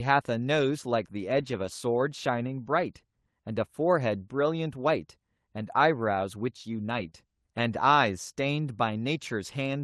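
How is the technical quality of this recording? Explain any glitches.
The recording came through an Opus call path with a top end around 12 kHz, at a rate that fits 32 kbps. Three glitches break into it, two of them close together around 7 s.

From 1.31 to 1.69 s, and again from 6.93 to 7.07 s, the sound turns rougher and grainier without ever dropping out. This is a lost packet rebuilt from error correction. Packets went missing, so the decoder played the coarse low-bitrate copies carried in the packets that followed, about 200 ms of audio in the first stretch and 80 ms in the second.

Immediately after, from 7.09 to 7.13 s, there is a brief smear or wobble in the sound. This is short concealed packet loss. About 20 ms never arrived in time, so the receiver filled the hole by extending the sound just before it, then blended back into the real signal.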